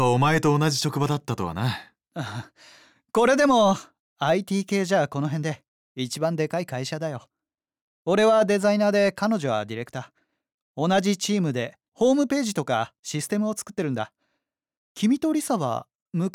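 No audible technical faults.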